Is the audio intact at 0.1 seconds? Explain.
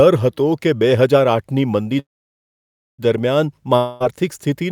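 Yes, the speech at 0.1 seconds is intact, with no audible fault at that moment.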